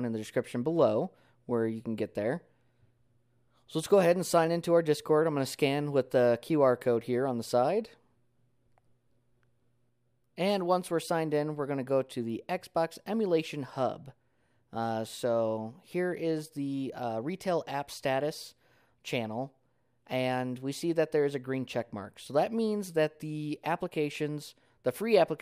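No technical faults can be heard anywhere in the clip. There is nothing to report at any point in the recording.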